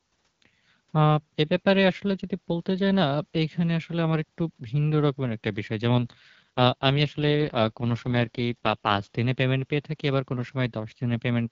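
From 5.90 to 9.05 s the speech turns raspy and synthetic with no gap or narrowing: an AMR rate drop, which fits the codec falling to 6.6 kbit/s.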